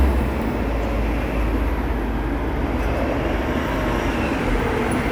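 No technical faults can be heard anywhere here.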